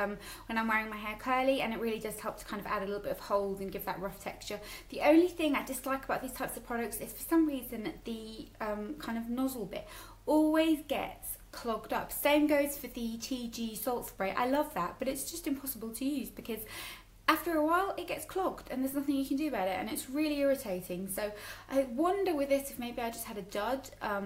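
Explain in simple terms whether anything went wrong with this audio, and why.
Nothing went wrong here: there are no dropouts, clicks, glitches or other technical problems anywhere in the recording, so there's nothing to fix.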